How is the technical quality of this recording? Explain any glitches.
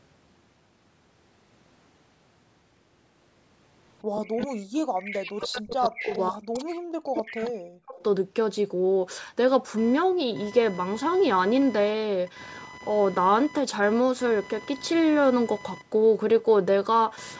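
There are two related problems, both packed into the stretch from about 4 to 8 seconds, and both typical of a call where one side is on speakerphone.

Echo leak: a copy of the speech trails it by 134 ms at 4.15–4.48, 4.95–5.2, 5.41–6.2, 6.54–6.75, 7.14–7.5 and 7.98–8.03 s. It ranges from about 10 dB below the speech down to about 30 dB below. This is likely a loudspeaker echo the far-end canceller didn't fully scrub out.

Speech suppressed in double talk: from 4.47 to 7.96 s, for roughly 3 seconds in total, the main speech keeps ducking, by as much as about 40 dB at worst. The likely cause is the echo canceller confusing overlapping talk with its own echo and clamping down on everything.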